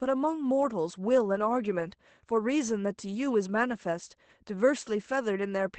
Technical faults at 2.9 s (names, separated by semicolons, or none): lost packet rebuilt from error correction